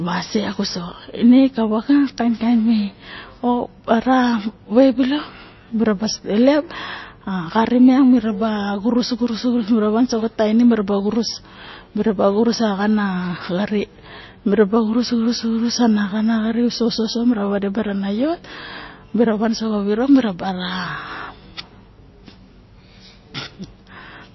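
Speech runs from start to end with plainly audible damage, likely MP3 compression: nothing sounds above 5.8 kHz, and weak detail swirls and chirps on s sounds, which fits a starved bitrate near 24 kbps. A simple low-pass filter would dull without that watery flicker.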